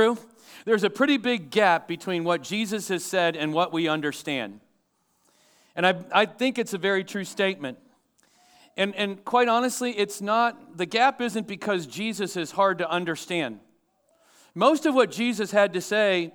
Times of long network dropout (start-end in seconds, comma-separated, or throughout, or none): none